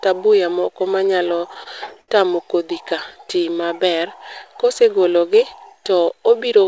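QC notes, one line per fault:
1.30–2.10 s, repeated stalls (stutter): the speech hesitates eight times in under a second as packets arrive late and the jitter buffer keeps running dry. Each gap is bridged by extending the last sound, about 141 ms of stretched fill in all, the longest single hold near 68 ms, so roughly a fifth of this stretch is concealment. Nothing is lost, but the delivery catches and drags in a halting, stuttering rhythm.
3.25–3.74 s, jitter buffer slow-down: here the receiver is building up a reserve by repeating single pitch periods and short slices of pauses over and over. That adds about 74 ms, so this half-second plays at roughly 87 percent speed while the pitch stays put. The result is drawn-out, slightly elongated sounds, a brief slackening of pace rather than a deepening of tone.
5.92–6.64 s, jitter buffer speed-up: with more audio queued than the buffer wants, the receiver trims away tiny pieces one or a few pitch periods long, many times in succession. 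Around 50 ms disappears over this stretch, pushing it to about 107 percent speed at unchanged pitch. The closing moments sound a little hurried and clipped in pace, with no chipmunk shift, since only timing is compressed. Throughout, the G.722 call codec leaves nothing above 8 kHz.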